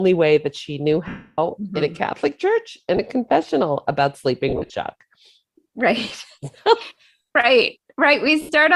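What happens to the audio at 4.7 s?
Around 4.48 to 4.72 s the speech breaks up from lost LE Audio frames: about 140 ms of audio is missing in short gaps of up to about 40 ms. The LC3 decoder fills each gap by reusing the previous spectrum with random signs, so the sound turns into a brief noisy smear. On a spectrogram the harmonic lines blur into grainy patches there, and the waveform shows jittery, irregular stretches.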